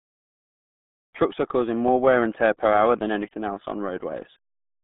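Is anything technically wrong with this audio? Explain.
Yes. Throughout the speech, the sound is muffled and gargly, with a watery, bubbling roughness and no brightness at all. Nothing reaches above about 3.7 kHz, and the usable band sits roughly between 150 Hz and 3.5 kHz. This is the RealAudio 14.4 codec at work: heavy low-bitrate speech coding, consistent with about 8 kbit/s, discards the upper band and rebuilds the rest coarsely, which produces that smeared, dial-up-era character.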